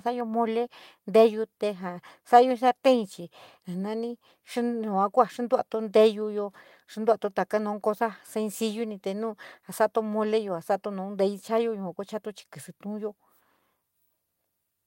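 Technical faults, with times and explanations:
No technical faults can be heard anywhere in this recording, and the signal carries through its whole length without any break, dropout or other disturbance.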